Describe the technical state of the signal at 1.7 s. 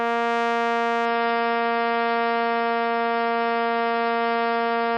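At 1.7 s the adaptive stream has dropped to a lower bitrate, from 1.06 s to the end, which fits a fall from about 128 to 16 kbit/s MP3. The music loses everything above 5.5 kHz and turns dull and smeared, with no gap at the switch.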